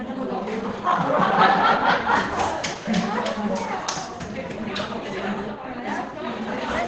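The likely cause is Opus compression at a very low bitrate, running for the whole clip. Starved of bits, the encoder appears to have dropped into its speech-oriented SILK mode at wideband, which fits a rate of roughly 12 kbps. The damage is heavy: nothing survives above 8.6 kHz, so the sound is muffled and dull, and what remains comes through hoarse.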